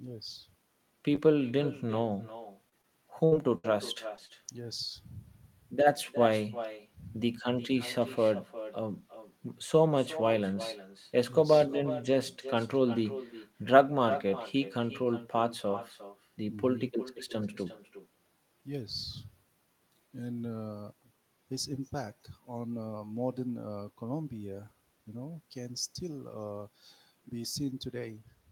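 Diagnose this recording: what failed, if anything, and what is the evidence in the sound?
Call processing: the far end has no echo canceller, so its loudspeaker feeds its microphone, and every phrase returns roughly 0.4 s later as a thinner copy about 13 dB down.

Network: short concealed packet loss, with 20 ms gaps (40 ms at 4.26 s) patched by extending the preceding sound, heard as brief smears at 1.15, 2.69, 2.82, 4.16 and 4.26 s.

Network: a burst of packet loss drops about 60 ms twice, at 3.25 and 3.58 s; concealment holds then fades the last sound before audio resumes past the missing stretch.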